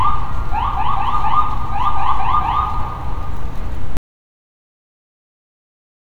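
A recording of sounds that suffers an audio dropout to silence at 3.97 s. The sound stops abruptly and the remainder of the clip, to the end, is silent with no room tone, most likely because the input signal was lost while recording continued.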